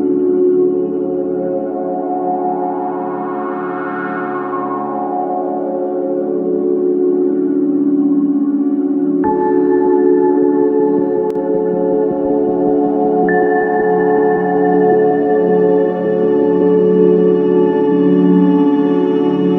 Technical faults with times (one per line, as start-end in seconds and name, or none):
11.30-11.35 one channel drops out